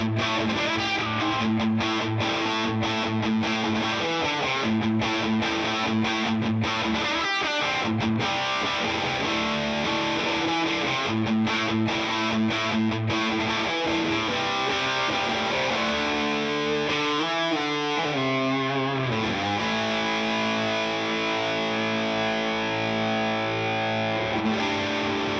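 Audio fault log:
No faults detected.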